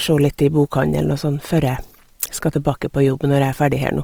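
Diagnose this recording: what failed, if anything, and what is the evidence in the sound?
The codec stage failed, and it's plainly audible through the whole speech clip. Voiced sounds turn rough and grainy rather than swirly, yet the top still reaches 20.4 kHz. That's likely Opus compression in CELT mode, filling starved bands with noise, consistent with about 24 kbps.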